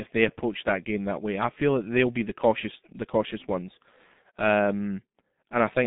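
From start to finish the speech has passed through a G.723.1 codec, an early internet-telephony coder that models the voice in 30 ms frames. The heavy data reduction points to its 6.3 kbit/s mode. Everything outside roughly 150 Hz to 3.6 kHz is gone, so the voice sounds boxed-in and muffled. Because the voice model updates only once per frame, the tone is hoarse and consonants are blurred.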